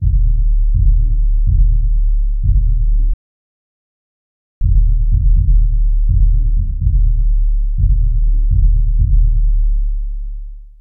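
At 3.14 s the audio stops dead in a rebuffering stall: the player ran out of downloaded data and waited. Silence lasts until 4.61 s, adding 1.47 s, then the sound resumes exactly where it left off. The waveform shows a flat gap, and the spectrogram a blank vertical band.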